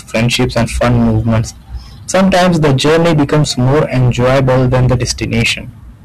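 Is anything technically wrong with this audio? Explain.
Yes. Hard clipping runs throughout: the speech is overdriven by about 21 dB, so nearly a third of samples hit the ceiling and flatten, adding harsh high harmonics heard as fuzz on every loud sound.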